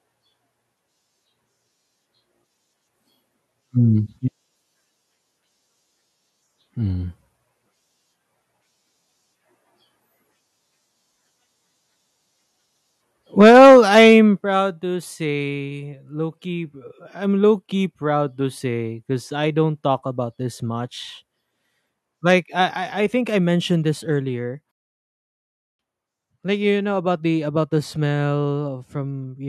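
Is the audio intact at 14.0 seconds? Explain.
No. From 13.4 to 14.14 s the loudest syllables of the speech carry a harsh, crackling edge, flattened at the top. This is likely microphone overload: input driven about 6 dB past the converter's limit, clipping roughly a tenth of samples. Unlike dropouts, the sound never vanishes.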